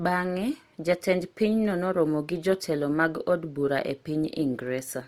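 Right through the speech there's a grainy, rough edge, likely Opus compression in its music mode, starved bands filled with noise at what sounds like about 24 kbps.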